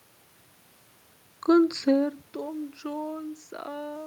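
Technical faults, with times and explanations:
No technical faults heard.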